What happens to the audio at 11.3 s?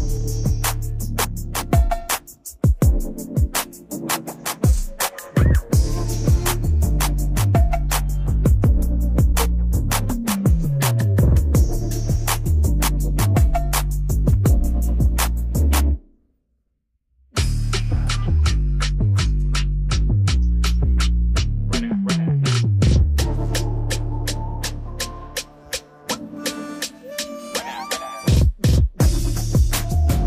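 Nothing goes wrong at 11.3 s; the audio plays through that moment intact, with no dropout, click, glitch or other fault to be heard.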